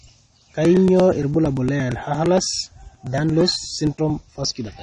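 Throughout the speech, nothing is heard above 10 kHz, and the remaining band sounds dull and smeared, with a fizzy, warbling edge on sibilants. This is most likely AAC compression: AAC-LC at a low rate, around 32 kbps, discarding and coarsely quantising high-frequency detail.

From 0.08 s to 4.79 s there are periodic USB or driver dropouts. Every 0.115 s, roughly 10 ms of audio is skipped outright, around forty times in all, producing a steady train of ticks that tracks a blocking interruption at a fixed interval.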